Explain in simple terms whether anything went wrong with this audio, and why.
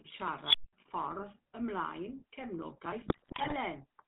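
GSM full-rate codec, throughout: the speech passes through an old phone codec that drops everything above 4 kHz and rebuilds the voice from coarse pulses, giving a buzzy, gravelly sound.

Unstable filter, 0.45 to 0.73 s: a filter feeding on its own output runs away, so a high squeal near 3 kHz swells within about 75 ms, then the sound drops out for 0.2 s.

GSM bit errors, 3.06 to 3.56 s: corrupted data reaches the phone decoder, which rebuilds the voice from wrong settings, so it breaks into squawks, pops and gargling.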